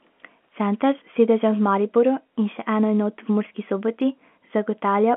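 Telephone-band speech with no technical faults to report.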